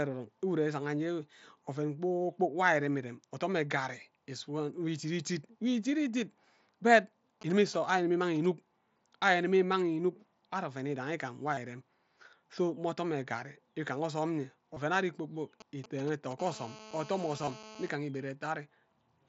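At 7.42 to 8.46 s a burst of GSM signalling bursts breaks in: a nearby 2G phone, not yet in a call, keys its transmitter in short clusters, and the audio circuitry rectifies the RF pulses. What comes through is a galloping run of ticks and brief 217 Hz buzzes, sitting roughly 20 dB below the speech and unrelated to it.

At 11.55 to 11.57 s there is concealed Bluetooth headset packet loss. About 22.5 ms of audio went missing on the headset link, which fits three lost mSBC frames, and the receiver filled the gap by repeating the best-matching recent stretch of waveform. A short run like this gives a brief buzzy, held tone with a small warble where real audio returns. The same happens at 14.74 to 14.77 s, just before "ari kpor kpok", again about 22.5 ms long.

Right after "ari kpor kpok", at 15.60 to 16.33 s, the GSM signalling bursts return. They are somewhat stronger this time, around 15 dB below the speech, with the same ticking, galloping 217 Hz pattern.

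From 16.39 to 17.89 s the phone is in a call, and the result is continuous GSM phone buzz. The transmitter now pulses steadily at 217 Hz, producing a hard, raspy buzz rich in harmonics at about 18 dB below the speech.

Inside that buzz, at 17.38 to 17.47 s, the concealed Bluetooth packet loss recurs. About 45 ms is lost, scattered over 90 ms, with no single gap longer than 22.5 ms. The repeated patches give a brief buzzy, held quality with a small warble as the real audio resumes.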